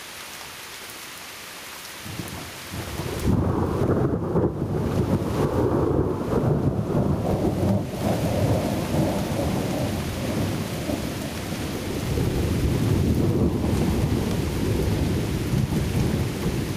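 Gain pumping runs throughout: loud and soft parts sit closer in level and the sound is squashed, swinging around 15 dB, likely from excessive gain feeding a fast limiter, unlike a gate's abrupt silence.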